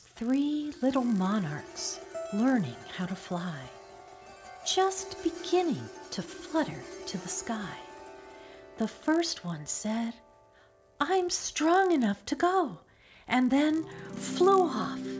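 From start to end, a resampler restarted on every block. Each 20 ms block was converted from 44.1 kHz to 16 kHz alone, leaving edge errors. This produces a 50 Hz buzz under the signal.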